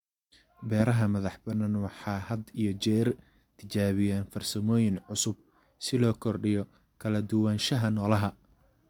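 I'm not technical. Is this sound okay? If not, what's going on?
Yes, nothing stood out as a problem when listening to this recording.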